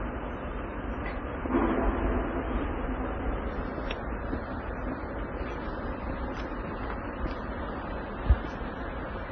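From the very start these everyday sounds carry the artefacts of more than one codec heard together, and nothing gets above 6.2 kHz, so the top end just stops. It's likely transcoding between lossy codecs: the mix of artefacts fits a low-rate AAC encode, somewhere around 24 kbit/s, later squeezed again through WMA at roughly 32 kbit/s. The second encoder wastes bits reproducing the first one's mess and then adds its own, and the lowest cut-off in the chain stays in place.

At 7.14 s Wi-Fi interference comes in and runs right to the end. You get a steady tick repeating every 102.4 ms, close to ten a second. That's a nearby Wi-Fi radio's beacon and data traffic being picked up and rectified by the audio circuit. It sits well under the sound, very roughly 35 dB down.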